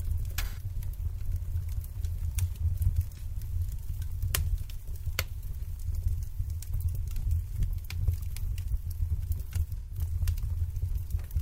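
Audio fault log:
0.43–0.63 s, 3.15–3.22 s, 9.78–9.97 s: AAC frame loss with concealment. The decoder rebuilds the missing span from the last good spectrum, so the audio smears into a noisy, phasey patch. The two longer gaps fit about three lost frames and the short one a single frame. On a spectrogram each gap shows as a blurred, frozen band with a grainy texture. On the waveform the envelope flattens before recovering.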